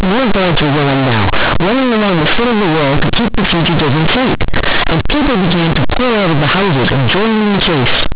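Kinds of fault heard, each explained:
Companded audio read as linear: mu-law bytes from the telephone coding are played as plain 8-bit samples without expansion, so the speech becomes very loud, buzzy distortion with heavy noise in pauses.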